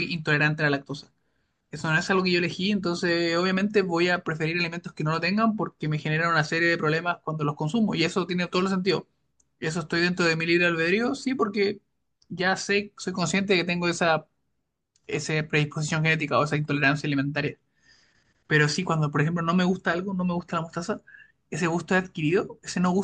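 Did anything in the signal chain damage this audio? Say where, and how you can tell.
No, nothing in the signal chain damaged this audio.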